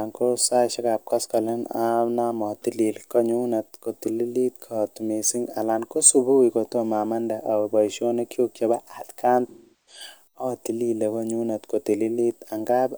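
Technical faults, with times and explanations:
9.47 to 10.02 s, AAC frame loss with concealment: after "chebo atkan", about 384 ms of coded speech dropped out, which fits a run of nine lost frames. The decoder rebuilt the gap from the last good spectrum. As repetition continued it faded towards silence, then recovered before "atilile konyunet". A spectrogram shows smeared, repeated bands decaying to a very faint noise floor, and the waveform shows a tapering dip.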